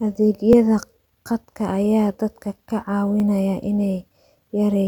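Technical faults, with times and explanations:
0.53 s and 3.2 s (just after "dadka ka"), repeated buffer: each time, new audio arrived late and the device played the previous piece once more. Each repeat is about 10 ms, which fits a 10 ms buffer, so it is heard as a brief click or buzz rather than a stutter. Essentially nothing is lost. The waveform shows an identical 10 ms stretch twice with a hard seam, and the spectrogram shows a thin vertical line at each join.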